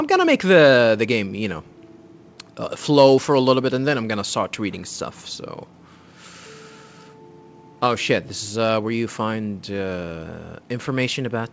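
No faults can be heard anywhere in this recording.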